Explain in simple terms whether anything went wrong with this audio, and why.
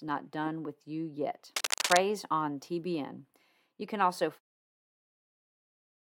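From 1.56 to 1.98 s there is cable scratch noise: a rough, rustling crackle about as loud as the speech. It is likely caused by a worn cable or connector being moved, so the electrical contact flickers. The smooth fade-out near 4.4 s is intentional.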